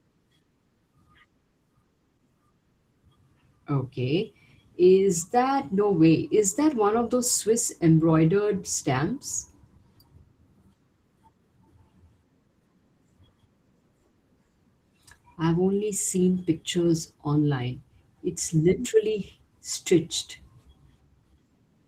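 From start to finish the speech carries plainly audible Opus voice compression. The low band comes through a linear-prediction coder with a thin layer above 8 kHz, so voices sound hoarse and slightly robotic, which fits a bitrate around 16 kbps.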